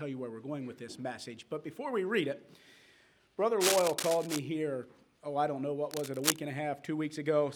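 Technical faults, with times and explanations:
3.60 to 4.39 s and 5.89 to 6.39 s, cable scratch noise: two bursts of dense, ragged crackle sit right on top of the sound, roughly as loud as the sound itself, so they're hard to miss. The first runs close to 0.8 s and the second about 0.5 s. The likely cause is a worn cable, connector or control being moved, its contact resistance jumping around quickly and pushing uneven noise into the signal. That's why it comes across as brief scratching or rustling.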